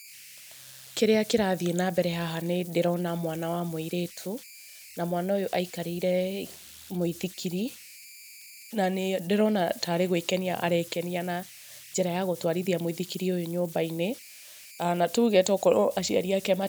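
Converter idle tones run throughout. An undithered delta-sigma converter cycles on small signals, leaving a tone near 2 kHz, about 21 dB below the speech.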